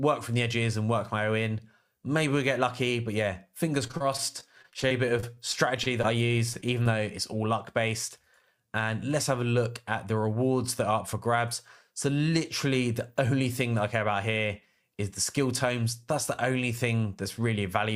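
From 3.87 to 6.06 s, repeated packet loss (robotic sound): a rapid run of dropouts, longest 28 ms, patched by extending prior audio, giving choppy texture with pieces missing.

Short concealed packet loss follows at 6.53–6.56, 6.60–6.64 and 6.83–6.87 s: roughly 20 ms holes each, filled by continuation, heard as brief smears or wobbles.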